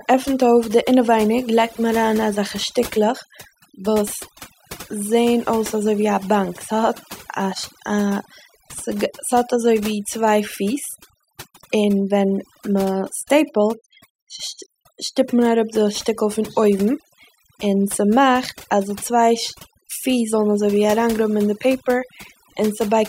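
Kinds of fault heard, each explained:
Overdone noise removal: noise reduction set far too aggressively across the whole speech clip, gating bands near the noise floor so pauses fall almost silent with twinkling specks; a spectrogram shows patchy, holed bands and isolated bright dots between phrases.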